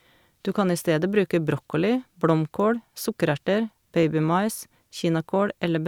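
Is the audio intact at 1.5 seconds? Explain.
Yes, the speech at 1.5 seconds is intact, with no dropout, click, distortion or other fault to be heard at that moment.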